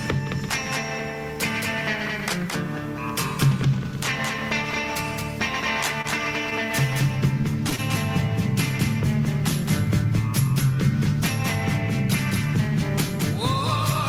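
A second copy of the whole audio trails the original by roughly a fifth of a second, about 5 dB quieter, full-band and with no room colour. This is a doubled audio track, likely from the same signal being picked up again through a slower path and mixed back in. At 6.01 to 6.06 s and again at 7.76 to 7.80 s, the sound briefly hangs and then resumes where it left off. Each is a short stall from a late packet: the receiver stretched the last sound for 27 ms and 24 ms while it waited, losing nothing but adding that much delay. At 7.41 to 7.46 s and 7.70 to 7.74 s there are brief smears where about 20 ms of audio each time never arrived. These are short concealed packet losses, with the gaps filled by extending the preceding sound before blending back.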